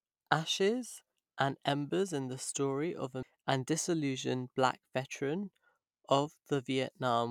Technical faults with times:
3.23 CD skip

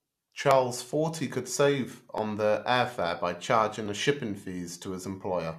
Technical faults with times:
0.51-5.53 clock drift buffer slips

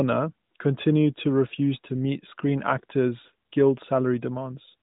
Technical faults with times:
none

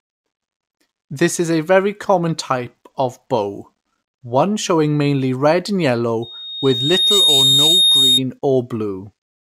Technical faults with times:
6.22-8.22 loudspeaker feedback squeal

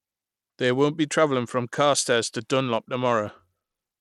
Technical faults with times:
0.00-4.01 Bluetooth SBC compression

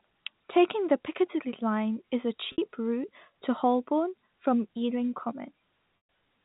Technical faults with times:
2.52-2.58 packet loss with pitch repetition
5.97-6.09 packet loss with pitch repetition

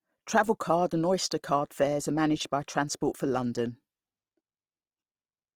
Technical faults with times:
0.00-5.55 Opus compression

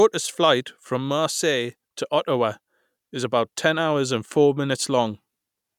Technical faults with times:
none

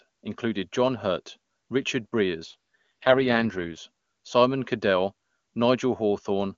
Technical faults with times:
2.45-3.78 AMR rate drop

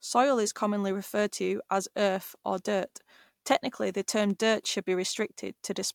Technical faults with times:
none

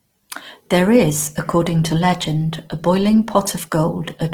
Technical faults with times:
0.00-4.33 Opus compression

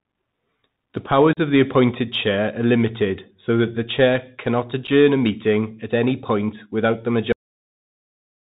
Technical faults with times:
0.00-8.59 Bluetooth CVSD headset codec
1.33-1.39 unconcealed Bluetooth headset packet loss
4.87-4.89 unconcealed Bluetooth headset packet loss
7.32-8.59 cut-off end

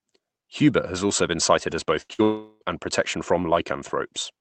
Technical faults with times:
2.01-2.21 burst of packet loss
2.23-2.63 long network dropout

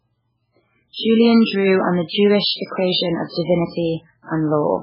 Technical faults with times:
0.00-4.82 MP3 compression

